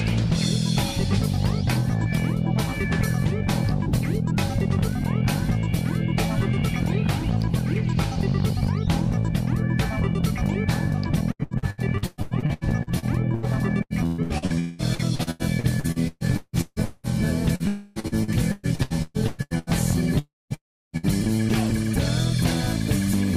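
From 11.31 to 13.46 s, 13.83 to 17.06 s and 18.00 to 19.70 s, packets were lost again and again. This is repeated packet loss. The stretches have 14, 17 and 10 gaps, and the longest gaps are 117, 193 and 121 ms. Each hole was patched by extending the previous sound, covering roughly 40 to 47 percent of each span. The result is choppy, robotic audio with pieces missing.

At 17.55 to 17.63 s, about 40 ms never arrived in time, which is a short concealed packet loss. The receiver filled it by continuing the last sound and then blended back, leaving a brief smear.

A long network dropout is the likely cause of what follows. From 17.68 to 17.99 s the sound is carried on as a synthetic continuation for about 0.28 s, with no silence. From 20.19 to 20.53 s and again from 20.54 to 20.96 s, the sound fades into silence, lasting about 0.21 s and 0.34 s. Audio resumes each time without the lost part.

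From 20.97 to 21.06 s, a burst of packet loss removed about 40 ms, and the arrival delay shifted by 18 ms. The last sound was held and faded across the gap before the audio picked up further on.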